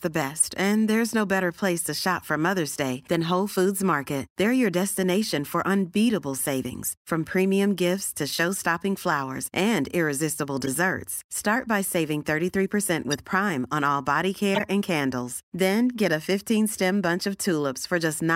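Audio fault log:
0.36–16.42 s, corrupt frame decoded: short glitches at 0.36–0.42, 6.84–6.89, 10.61–10.68, 13.11–13.19, 14.55–14.63 and 16.38–16.42 s, each 40 to 80 ms, spanning a few codec frames. Damaged bits got decoded as if valid, so misread gains and codes throw energy into the wrong bands for those frames. The first is loudest, peaking near about -5 dBFS. The last is faint, around about -25 dBFS.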